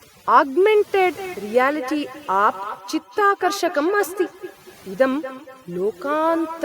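Overdone noise removal affects the whole recording. The noise reduction was set too strong and pulls individual frequency bands down to nothing whenever they sit near its noise estimate. Background noise becomes near silence with twinkling specks. On a spectrogram the gaps look dark and speckled, with isolated bright dots and ragged, holed harmonics.

From 1.16 s to the end, a feedback echo between two devices joins it. One device replays what another device's microphone sent, and that microphone captures it again outside its echo canceller's reach. Each word returns roughly 200 ms later, peaking at about 14 dB below the speech and sounding thinner and ringier. The waveform shows faint copies trailing each burst at that regular spacing.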